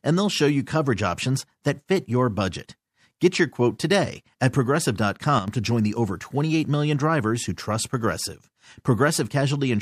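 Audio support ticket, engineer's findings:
Sudden gain jump, 5.39–5.48 s, just before "to join the over": speech and background noise drop together by about 7 dB in a single step. Likely a digital gain setting applied without a ramp, one sample to the next.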